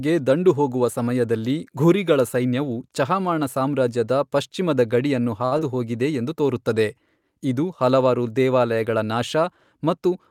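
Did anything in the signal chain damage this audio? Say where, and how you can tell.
Yes. A short stall from a late packet at 5.45 to 5.54 s: a network packet arrived late, the jitter buffer emptied, and the receiver held the last speech sound for about 63 ms before resuming at the same point. Nothing is lost, but the sound drags, and the delay afterwards is 63 ms longer.

A short concealed packet loss at 5.58 to 5.60 s: 20 ms of speech never reached the decoder. The receiver bridged the gap by briefly continuing the preceding sound, then blended back into the real audio, leaving a quick smear or wobble where a fragment of speech is missing.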